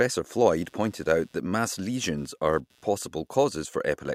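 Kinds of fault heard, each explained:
Computer activity noise: a faint buzz, around 150 pulses per second and roughly 40 dB below the speech, rides on the shared ground from about 0.36 s to 3.35 s, following the computer's activity; a spectrogram shows evenly spaced vertical striations independent of the speech.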